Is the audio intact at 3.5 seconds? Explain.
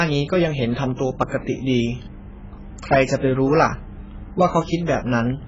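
No, at 3.5 seconds the speech sounds dull and smeared with a warbling, fizzy edge and nothing above 7.6 kHz, as it does throughout, likely from heavy AAC compression at a very low bitrate.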